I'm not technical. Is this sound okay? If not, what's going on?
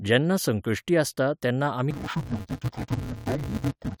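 No. From 1.91 s, right after "जेन्ना संकश्टी आसता तेन्ना", to the end, the speech turns dull and robotic with a steady buzz around 188 Hz. This is interleaved audio read as planar, with short blocks (about 5.3 ms, which fits 256-sample blocks). Unlike slowed playback, the pace stays normal and the pitch doesn't clearly drop.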